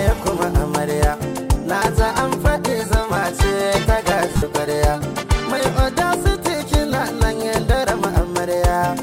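At 4.33 to 4.43 s, lost LE Audio frames leave a short gap, about 68 ms in total, scattered over 90 ms, with the longest unbroken run around 70 ms, which points to roughly nine lost frames. The LC3 decoder fills the gap by reusing the last good spectrum with randomised signs, so the tonal content smears into a brief noisy wash rather than cutting to silence. Plain waveform repetition would sound instead like a buzzy, pitched stutter. The light coding loss from the lossy compression sits underneath throughout.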